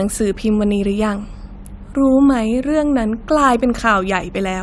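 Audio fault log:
Nothing faulty is heard in this speech recording.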